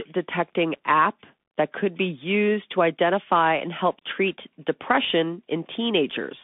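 Bluetooth CVSD headset codec damage runs throughout this speech clip, confining it to roughly 200 Hz to 3.5 kHz. One-bit up/down coding with an adapting step, fitting a 64 kbps link, can't track fast high-energy detail, so sibilants turn scratchy over a granular hiss.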